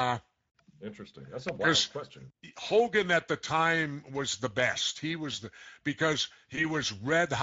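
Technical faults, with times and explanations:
Throughout: Speex codec, running at about 16.8 kbps, leaves the speech plainly hoarse and noisy because the CELP coder has too few bits for its excitation.
6.55–6.65 s: VoIP packet loss concealed by the speech codec, one lost 20 ms frame replaced by extrapolated pitch and filter, giving a brief buzzy or noisy, fading smear that lingers afterward.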